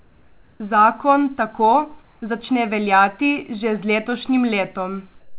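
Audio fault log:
0.0 to 0.6 s, comfort noise in place of the background: The opening pause is a steady, featureless hiss. It sits about 37 dB below the loudest speech and is about 1 dB louder than the real background. The likely cause is discontinuous transmission: the sender stopped sending during silence, and the receiver filled the gap with synthetic noise shaped roughly like the room.
5.2 to 5.39 s, comfort noise in place of the background: After the speech ends, the tail turns flat and smooth. It sits about 33 dB below the loudest speech and is about 4 dB quieter than the real background. The same fill likely replaces the room's detail here, so the end sounds dead.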